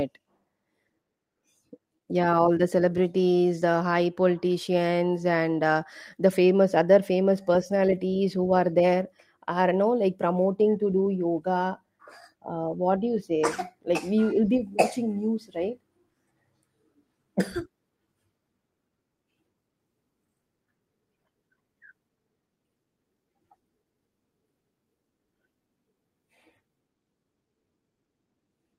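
A speech recording with nothing technically wrong with it.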